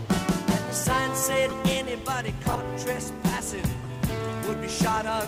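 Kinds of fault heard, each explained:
Corrupt frame decoded: damaged bits inside compressed frames were decoded and played anyway, so misread gains and codes put energy at the wrong frequencies for a few frames at a time. Three short blips result, at 1.49 to 1.54 s, 2.51 to 2.60 s and 3.83 to 3.86 s, the middle one loudest near -15 dBFS and the last faintest near -30 dBFS. On a spectrogram they are brief, frame-length blocks of misplaced energy.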